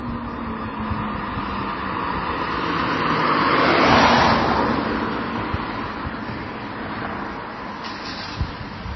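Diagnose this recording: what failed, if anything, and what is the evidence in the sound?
The codec stage is where this went wrong, and it looks like transcoding between lossy codecs. Through the whole clip there's nothing above about 5.9 kHz, so the top end is simply gone. On top of that you get two layers of artefacts at once: the first codec's artefacts plus the ones the second codec adds, heard together. That mix fits a low-rate MP3, around 24 kbit/s, that was likely re-encoded to HE-AAC at a similar rate. The second encoder wastes bits on the first one's damage and never gets the lost band back.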